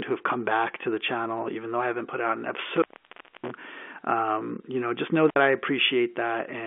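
Telephone speech, carried over a narrow line band of about 250 Hz to 3.4 kHz. It has an intermittent contact fault. After "haven't put out an", the sound drops out from 2.74 to 3.52 s, with crackle at the edges. A shorter break of about 60 ms follows "you know just know" at 5.29 s. Each break sounds like a loose plug or cable opening briefly.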